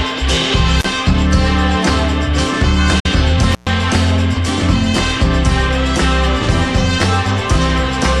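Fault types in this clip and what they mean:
Intermittent contact: a loose plug or cable briefly loses its connection, so the signal breaks off with crackle as the contact opens and closes, and faint hiss remains while it is open. It happens twice here. Near 0.79 s the line is open for about 34 ms. Between 3.52 s and 3.70 s the break is longer, about 120 ms.
Digital broadcast dropout: the receiver stopped getting usable data and muted until valid frames arrived again, so the material sent during that time is gone rather than damaged. Around 2.99 s the sound fades out over roughly 8 ms, stays silent for about 48 ms, and then comes back. The length of the gap fits the loss of two consecutive frames.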